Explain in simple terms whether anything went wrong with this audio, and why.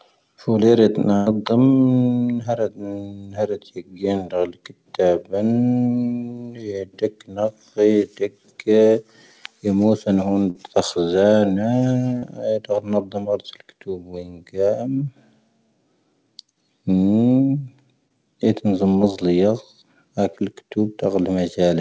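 A few things went wrong, all from the network dropping bits of the call.

There are two bursts of packet loss, at 1.16–1.28 s and 10.50–10.57 s. Chunks of speech went missing, so the receiver stretched the last sound into a fading buzz or hiss before the talking picked up further on.

There are three short concealed packet losses, at 12.19–12.24 s, 18.08–18.12 s and 19.02–19.05 s. Tiny gaps were patched over, leaving brief smears or wobbles where a quick consonant could slip away.

Throughout, it sounds like an ordinary call, with the top end stopping around 8 kHz.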